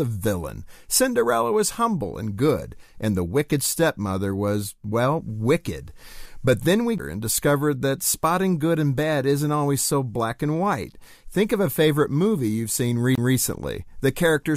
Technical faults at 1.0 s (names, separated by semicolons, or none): none